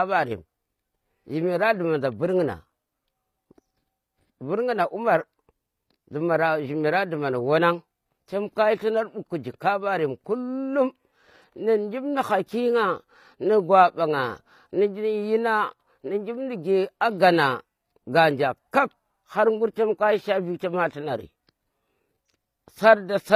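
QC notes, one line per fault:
Throughout, HE-AAC compression: the treble is plainly synthetic and the s sounds come out gritty and lispy, likely from band replication at a low bitrate around 24 kbps.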